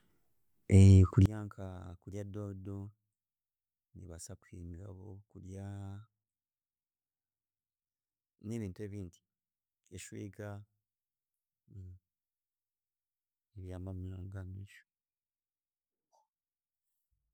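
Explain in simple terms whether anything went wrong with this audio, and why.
From 1.26 s to the end, the speech suddenly sinks to a faint trace. This is likely one channel inverted: when left and right are combined, the shared voice cancels itself out. Unlike a dropout, it doesn't go fully silent, because a faint remnant stays.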